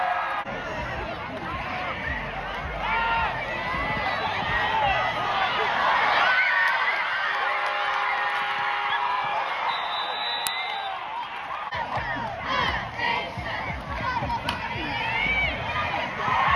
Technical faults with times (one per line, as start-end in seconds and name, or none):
10.47 uninitialised buffer